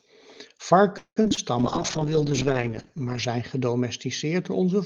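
Speech carried over a WebRTC call using the Opus codec shows two faults. From 0.97 to 1.39 s there is repeated packet loss (robotic sound). Four holes fall in quick succession. The longest runs about 191 ms, and roughly 60 % of that stretch is concealment rather than received audio. The decoder covers about 254 ms by stretching the last received sound, which gives a choppy texture. Another 60 ms is simply missing, so fragments drop out entirely. From 1.59 to 4.51 s a call bitrate drop follows. Before it, the audio carries energy up to 12 kHz, which fits an encoder running near 32 kbps. During the drop the top end falls to 8 kHz and the coding turns coarse and watery, consistent with the rate being cut to about 9 kbps. The worst of it lasts about 1.7 s before the bitrate starts to recover.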